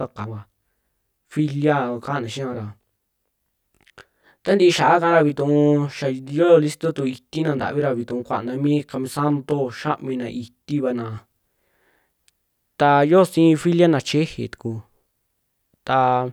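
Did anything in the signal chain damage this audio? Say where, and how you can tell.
Yes: channel delay (comb filtering), 0 to 11.2 s. A buffer lags one channel about 20 ms before the mono sum, notching evenly from about 30 Hz, so speech sounds rough or slightly doubled.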